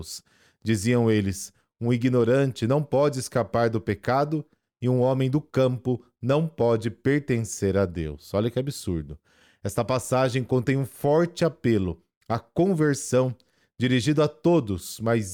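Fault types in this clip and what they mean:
No fault types are present in this clip.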